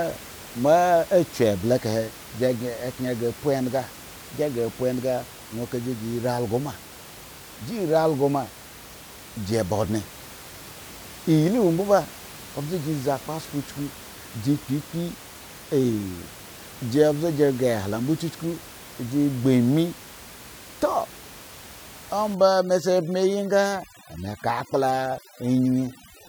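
From 22.35 s to the end at 26.29 s, overdone noise removal sets in. The reduction is too strong, so bands near the noise estimate are cut away, along with quiet parts of the speech. The room noise, about 19 dB below the speech, drops and breaks up into twinkling specks.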